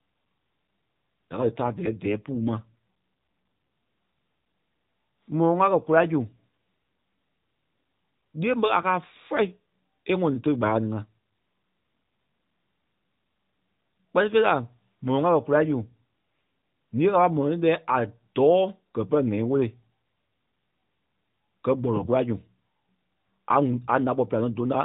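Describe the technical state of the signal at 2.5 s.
The speech turns rougher and more synthetic, with no gap or band change: an AMR rate drop from 1.36 to 2.75 s, which fits the codec falling from 12.2 to 5.9 kbps.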